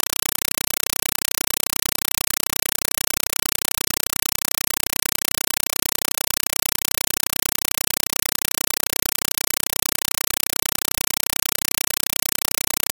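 From start to finish you get a compressed stream played as audio. Playback took an AC-3 bitstream as plain samples instead of decoding it, so each frame comes out as a burst of raw data noise about 5.33 ms long, then silence, repeating 31.25 times a second. It's a harsh, loud, buzzy chatter with nothing of the real sound left, and the data density points to something like a 256 kbps stream.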